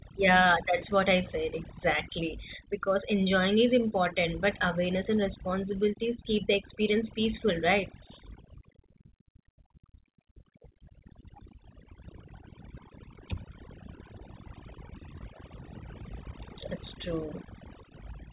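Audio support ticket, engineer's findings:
Background drops, breaking into twinkling specks, throughout. Probable component: overdone noise removal, suppressor set too hard on noisy input, gating individual frequency bands down whenever they sit near its noise estimate and dragging quiet speech detail down with them. Top end stops at 4 kHz, consistent with a G.711 mu-law call leg at 64 kbps.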